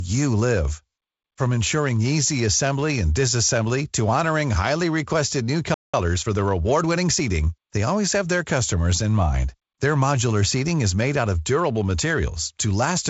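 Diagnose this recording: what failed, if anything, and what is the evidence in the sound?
A playback stall, likely the player's buffer running dry, cuts the speech to silence after "honoring highly requested new" from 5.74 to 5.94 s, about 0.19 s.

Time-compressed catch-up then trims the backlog. From 5.94 to 7.22 s, the speech runs about 1.15 times fast at normal pitch, until "they always have their".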